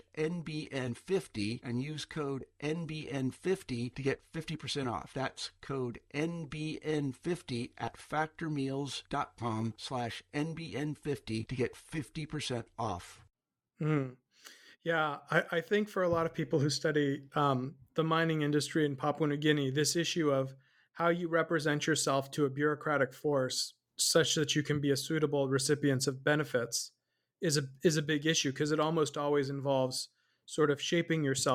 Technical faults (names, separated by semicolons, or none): compressed frames skipped